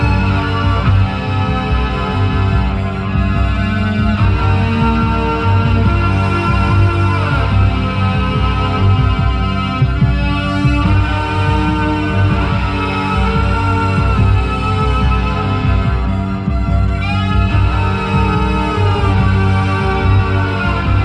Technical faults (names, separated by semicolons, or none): none